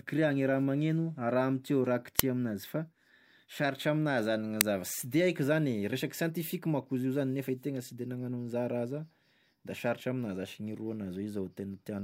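Speech, interrupted twice by an uninitialised buffer fault, at 2.19 s and again at 4.61 s. Each time, playback read a block of memory before any audio had been written to it, so leftover data came out as a loud click of digital noise lasting about 2.7 ms, which fits a 128-sample buffer. On a waveform each burst shows as a sharp spike, and on a spectrogram as a thin broadband vertical stripe.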